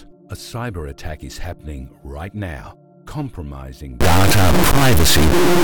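From 4.01 s to the end of the clip, a stuck bit is likely: one high-order data bit, worth around -10 dBFS, stays fixed, so about half the sample values jump by that amount. The sound turns harsh and buzzy, and quiet stretches fill with loud noise.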